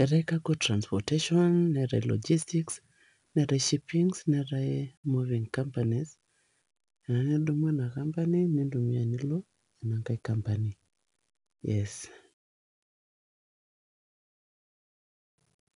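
Speech, encoded throughout with 4-bit ADPCM compression at about 88 kbps, which points to a sample rate near 22 kHz. Each loud stretch carries a gritty hiss that tracks its level, sharp onsets distort, and nothing is heard above 10.6 kHz.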